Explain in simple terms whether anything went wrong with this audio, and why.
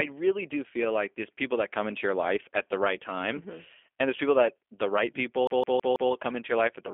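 Yes, two things went wrong.

First, the whole recording has passed through G.729 codec compression. This is a phone-line format that rebuilds speech from a small model of the voice. It keeps only a narrow band, roughly 300 Hz to 3.4 kHz, and nothing above 3.5 kHz survives. That is why the speech sounds muffled and thin. The codec damage is plainly audible. The voice has a slightly rough, synthetic edge.

Second, there is a CD stuck on one turn, from 5.47 to 6.12 s. It starts right after "people that the right". The same slice of about 0.16 s plays four times in a row, with a tiny gap at each jump. This is the quick, even stutter of a skipping disc, where the laser keeps falling back to the same spot. Normal playback resumes at "come into your".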